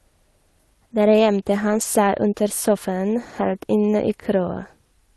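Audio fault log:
1.69–1.83 s, lost packet rebuilt from error correction: several separate packets on the Opus call path were lost, and the decoder filled the gap with the low-bitrate copies carried in the following packets. No gap is heard, but about 80 ms of rougher, noisier audio fits four lost 20 ms packets.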